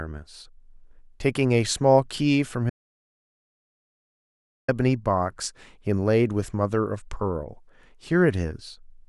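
At 2.70 s the speech cuts off abruptly and the track falls to silence until 4.68 s, a gap of 1.98 s with no room tone or noise floor underneath. This is an audio dropout to silence: the input signal was likely lost, through a disconnected device, a failed link or a mute, while recording continued writing silence. Speech resumes mid-flow at 4.68 s, and whatever was spoken during the gap is absent.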